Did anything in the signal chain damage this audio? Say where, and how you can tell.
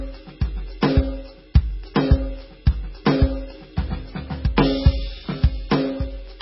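Yes, at the codec stage, and it runs the whole way through the music. Nothing comes through above 5.6 kHz, so the top end is simply gone, and the remaining sound has a heavy watery swirl, with metallic chirping on bright content and soft, smeared attacks. That's classic MP3 compression, likely at a starved bitrate that fits roughly 16 kbps. With so few bits, the encoder lops off the treble and keeps dropping weak frequency lines in and out from frame to frame.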